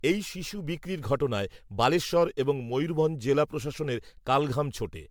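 Throughout, the speech sounds swirly, hollow and smeared, with blurred attacks and nothing above 19.9 kHz. That's generation loss, likely from around seven MP3 re-encodes.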